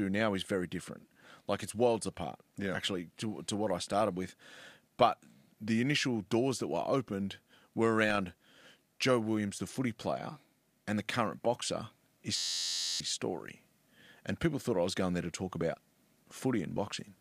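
The clip is speech, and it has a system hang loop from 12.37 to 13.00 s. The computer or driver stalled while the sound hardware kept replaying its ring buffer. One 11.61 ms slice of audio repeats about 55 times. Because the loop is so short, it is heard as a steady buzz at 86.1 Hz rather than a stutter. The loop length fits a 512-sample buffer. Roughly 0.7 s of the real signal is lost.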